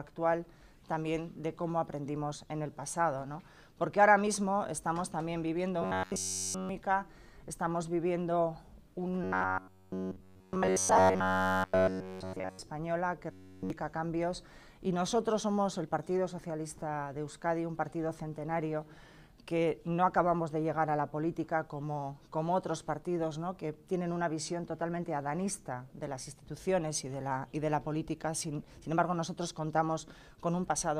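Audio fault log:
5.82–6.69 s, 9.24–12.59 s, 13.32–13.70 s, robotic sound from repeated short buffers: the sound becomes a rigid metallic buzz locked at 93.8 Hz, likely from a roughly 10.7 ms buffer looping while new audio is skipped.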